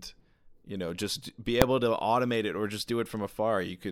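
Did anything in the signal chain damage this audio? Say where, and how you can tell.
Yes. Invalid numbers at full scale, at 1.62 s between "you know just be" and "able to automate it", point to sample-format conversion: a single 0.73 ms bang far beyond the speech peaks, fitting a 32-sample block, rather than a gap or a softer click.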